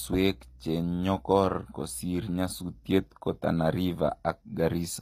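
From start to finish the speech has a bright but synthetic top end. The s sounds come out gritty and lispy, with a metallic sheen, and nothing is heard above about 14.9 kHz. This is likely HE-AAC compression at a low rate, which fits a bitrate around 24 kbps. The codec encodes only the lower spectrum and rebuilds the treble by copying lower bands upward under a coarse envelope. The rebuilt harmonics don't line up with the real ones, and that mismatch gives the sibilants their rough edge.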